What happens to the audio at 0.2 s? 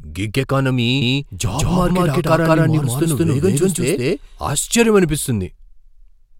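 Nothing goes wrong at 0.2 s: the audio there is intact, with no dropout, click, distortion or other fault to be heard.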